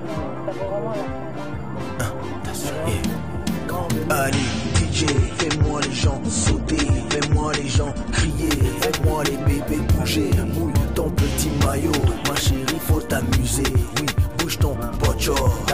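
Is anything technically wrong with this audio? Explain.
Yes. From 4.30 s to 8.30 s there is an adaptive stream at a lower bitrate: when the connection slowed, the player switched to a leaner encode, which fits a drop from about 96 to 32 kbit/s. Nothing above 9 kHz remains and codec artefacts rise. Unlike packet loss, the quality changes suddenly with no gap or dropout.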